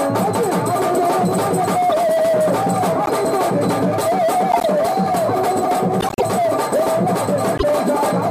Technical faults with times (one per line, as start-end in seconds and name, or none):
3.05-3.09 corrupt frame decoded
4.51-4.65 corrupt frame decoded
6.01-6.23 corrupt frame decoded
7.57-7.63 corrupt frame decoded